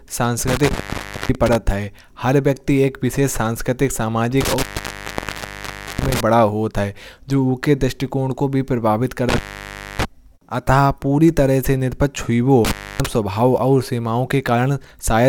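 Intermittent contact breaks the speech at 0.48–1.55 s, 4.41–6.21 s, 9.29–10.05 s and 12.65–13.06 s. A loose connection opens for about 0.56, 1.37, 0.61 and 0.28 s. Crackle marks each edge, with faint hiss between.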